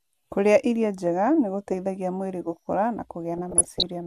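From 3.34 to 3.86 s, just after "gũteithagia mwĩrĩ gũkũra na", DAB burbling appears. Residual bit errors, on the order of half a percent, slip past error correction and corrupt MP2 samples and scale factors, so sub-bands jump frame by frame into bubbling, chirping squelches over the speech.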